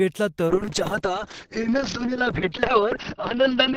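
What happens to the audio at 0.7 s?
At 0.7 s you're inside a call bitrate drop that starts at 0.48 s and runs to the end of the clip. The bandwidth estimate fell, so the encoder had to squeeze the speech into far fewer bits. The sound fits a drop from about 48 kbps to about 7 kbps, bottoming out for about 1.6 s. The coding gets coarse and rough, and the top end is chopped from 20 kHz down to 6 kHz, so it sounds muffled.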